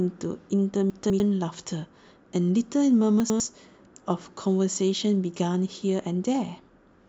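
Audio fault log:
0.9–1.2 s and 3.2–3.4 s: chunks out of order. A 100 ms chunk plays two, then one, chunks late, giving jumbled speech; nothing is missing or doubled.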